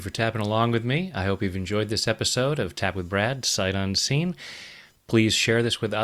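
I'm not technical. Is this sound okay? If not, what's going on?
No. Throughout the speech there is computer activity noise. It is a faint, high buzzing that pulses around a thousand times a second. The computer's busy parts disturb the audio circuit's shared ground. So the buzz follows the computer, not the voice.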